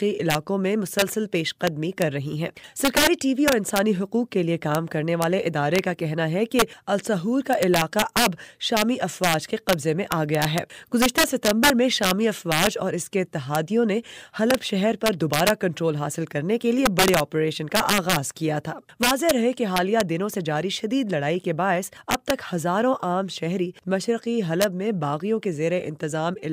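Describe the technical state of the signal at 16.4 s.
At 16.4 s the signal carries the integer overflow that runs through the entire clip. The level has been pushed about 6 dB past full scale, and instead of being limited, each sample that exceeds the integer range wraps around to the opposite extreme. Only a small fraction of samples, well under one percent, go over, but every one of them jumps across the full range. The result is abrupt, violent cracks on the loudest peaks, far harsher than ordinary clipping.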